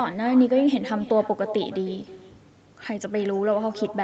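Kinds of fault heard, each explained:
Echo with no canceller: The far end played the call over a loudspeaker, and its microphone caught that playback. Nothing at that end removed it. So the speech returns after a round trip through the network, roughly a third of a second later. The copy sits about 15 dB below the direct speech. It sounds thinner, and it trails every phrase for the whole clip. Both copies stop at about 8 kHz, which fits the call codec's bandwidth.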